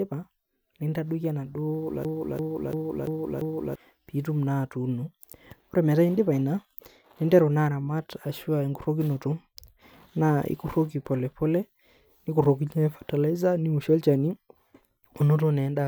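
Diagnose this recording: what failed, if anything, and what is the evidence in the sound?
A system hang loop in the driver and buffer stage: the host froze while the hardware kept cycling one ring buffer. From 2.05 to 3.76 s, a 341 ms slice repeats five times, a 2.93 Hz stutter before "pitum atuuno", which fits a 16384-sample buffer. About 1.5 s of audio is lost.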